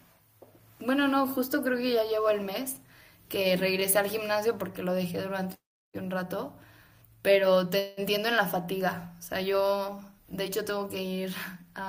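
Speech, with a call audio freeze from 7.79 to 8.03 s: the last sound is stretched into a fading buzz for about 177 ms, then speech resumes exactly where it stopped, with nothing lost. This is likely delayed packets emptying the jitter buffer.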